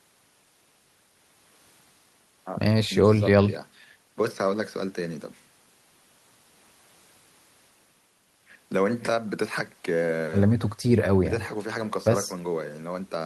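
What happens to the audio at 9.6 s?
Nothing goes wrong at 9.6 s; the speech continues there without any audible fault.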